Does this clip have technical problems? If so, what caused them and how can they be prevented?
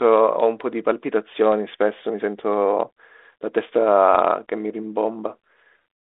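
No: the speech comes over a normal G.726 ADPCM telephone path at 32 kbit/s, limited to a 300 Hz to 3.6 kHz band with only light coding texture, so there is nothing to prevent.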